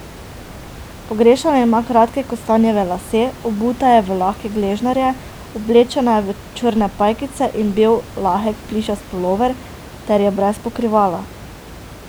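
No technical faults can be heard in the speech, and the only background is the room's own ambient noise, sitting about 19 dB below the voice.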